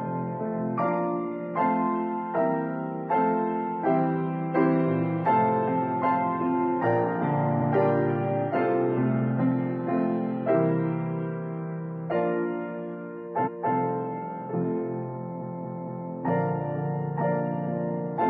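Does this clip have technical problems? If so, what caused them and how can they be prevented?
Yes, the clip has repeated frames, heard as stutters at 7.57–7.67 s (a 93 ms block played twice), 13.42–13.70 s (a 279 ms block played twice) and 15.38–16.07 s (a 232 ms block played four times, adding about 0.7 s). A run of encoded frames was written or delivered more than once. Unlike a dropout or underrun, nothing goes missing and no gap appears; identical audio loops instead. To prevent it, check stream sequence numbers and reject duplicate frames before decoding.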